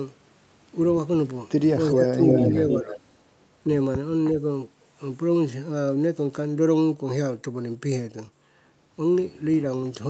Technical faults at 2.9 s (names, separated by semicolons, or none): echo leak; speech suppressed in double talk